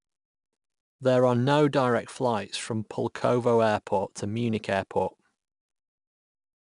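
Throughout the speech, the audio has passed through 4-bit ADPCM compression, with each sample stored as a coarse 4-bit step from a predicted value. The rounding error becomes a gritty hiss that rises and falls with the speech, plainly audible on louder syllables and roughening sharp onsets where the step size lags behind. Nothing is present above 10.6 kHz, which fits a reduced sampling rate of about 22 kHz and leaves the top end dull.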